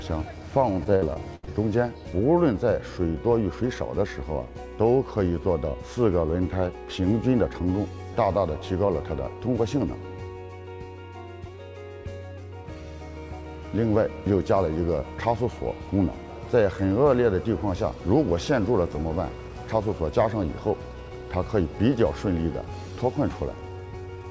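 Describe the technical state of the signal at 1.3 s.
At 1.3 s the audio is inside a burst of repeated packet loss (robotic sound) running from 0.84 to 1.49 s. Five gaps, the longest 73 ms, were patched by stretching the preceding sound, roughly 29% of the stretch. It sounds choppy, with pieces missing. A spectrogram shows smeared, repeated frames with abrupt edges, all below the 8 kHz ceiling of the G.722 call path.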